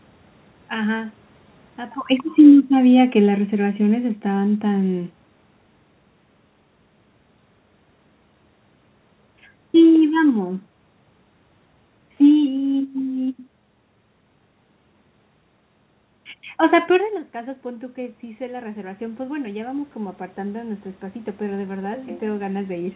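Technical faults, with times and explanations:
2.37 to 4.96 s, automatic gain falling: Just after the talker comes closer to the microphone, around 2 s, the automatic gain control judges the input too loud and pulls its gain down by about 6 dB over roughly two and a half seconds. The speech arrives loud and then sinks, and the room noise sinks with it. That shared drop is how you can tell the level change comes from the gain stage and not from the talker.
17.32 to 22.96 s, automatic gain rising: Around 17 s the talker moves back and the input falls by about 15 dB. The automatic gain control reads this as too quiet and slowly raises its gain, still climbing when the clip ends. The speech swells gradually, and the background noise swells with it. Both are heard through the narrow call band, with nothing above 4 kHz, so the lift brings up the noise floor as much as the voice.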